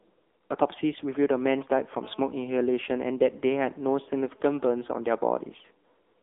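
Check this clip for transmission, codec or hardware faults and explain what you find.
Two faults are present: the whole clip has passed through a narrowband mobile codec, and a phone-interference buzz sits under the speech for part of it.

Throughout, the speech sounds thin, buzzy and somewhat synthetic, with nothing audible above about 3.7 kHz and a line band of roughly 300 Hz to 3.6 kHz. This is the AMR narrowband mobile codec (AMR-NB), which samples at 8 kHz and rebuilds the speech from a vocal-tract model excited by a few pulses per subframe. The coding damage is plainly audible, which fits a low mode near 8 kbps, where the sparse pulses leave that artificial edge.

From 2.03 s to 4.64 s, a hard, raspy buzz at about 217 Hz runs beneath the speech, rich in harmonics and unrelated to it. It stays nearly steady at about 35 dB below the speech. This is GSM phone buzz. A nearby 2G handset on a call transmits radio bursts 217 times a second, and the audio circuitry rectifies those pulses into an audible tone, so the buzz stays constant rather than coming and going.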